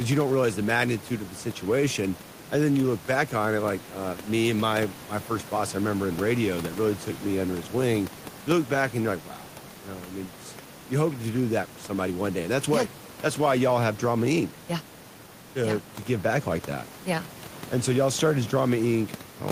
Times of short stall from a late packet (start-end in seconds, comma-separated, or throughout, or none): none